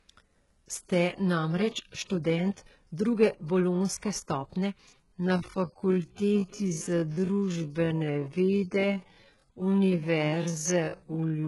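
Throughout, a likely low-bitrate source was saved again as a high-bitrate MP3, so the speech keeps its low-bitrate artefacts.

From 4.88 s to the end, after "študent druge bolonjske stopnje", a time-stretched section likely slows the audio to 0.55 times speed. The pace drops abruptly while pitch holds, and the speech drags.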